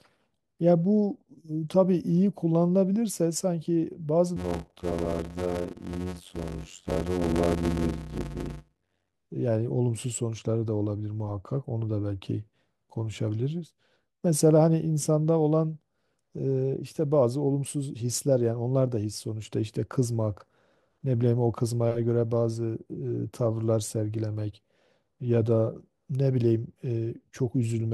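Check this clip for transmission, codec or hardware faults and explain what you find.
One fault is present in the speech. From 4.36 to 9.14 s there is a block size mismatch (padded): zero-filled gaps in each short block cause a 91.9 Hz buzz and 0.533× speed, but the timbre stays, unlike a sample-rate error.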